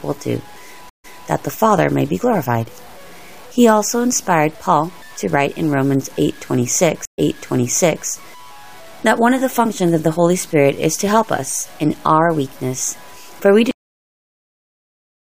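Throughout, the audio was likely reduced to a very coarse bit depth, which fits truncation to about 7 bits with no dither. This is low bit depth without dither. The rounding error tracks the signal, sitting roughly 30 dB below it, so quieter passages turn grainy and gritty in a way that shifts with the sound.

From 0.89 to 1.27 s there is a stream reconnect. The connection dropped, leaving 144 ms of silence, and a fresh decoder picked up the stream again. Playback resumes about 0.23 s earlier than where it broke off, so a short stretch repeats.

A second reconnect runs from 7.05 to 8.06 s, with 127 ms of silence. This time the audio restarts about 0.88 s back, repeating nearly a second of material.

At 13.71 s the clip has a cut-off end. The final buffers were never played, so the sound stops mid-event and drops straight to digital silence with no natural decay.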